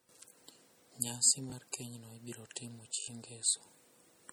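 Across the whole speech clip there is no content above about 20.1 kHz, and the detail lost in an earlier coarse encoding cannot be heard back in the audio. The likely cause is low-bitrate audio saved at a high bitrate: an MP3 made at a low rate, consistent with around 48 kbit/s, was re-encoded as a high-rate MP3, near 320 kbit/s. The larger file keeps the first encoding's artefacts intact and restores nothing it removed.

A repeated buffer occurs at 0.30 to 0.32 s. A short piece of sound plays one extra time with a hard join, giving a brief click-like stutter. The sound is consistent with a 20 ms buffer being replayed when new audio arrived late, and about 20 ms of sound is lost. The same fault recurs at 1.50 to 1.52 s, again as a single extra play of a 20 ms piece with about 20 ms of sound lost.

The longest repeated buffer runs from 3.00 to 3.08 s. Here the same 20 ms piece plays four extra times in a row, each repeat joined abruptly to the last, so it is heard as a short buzzing stutter rather than a single click. 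Roughly 70 ms of sound is lost while the device waits for fresh audio.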